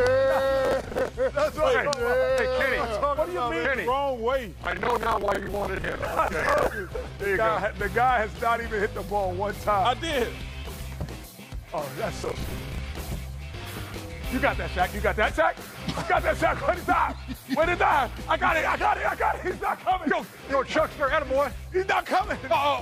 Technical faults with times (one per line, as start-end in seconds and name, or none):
0.65-1.09 processor overload crackle
4.64-6.66 processor overload crackle
10.41 damaged data in a compressed stream
12.18-12.78 processor overload crackle
13.54 damaged data in a compressed stream
15.30 damaged data in a compressed stream
19.51 damaged data in a compressed stream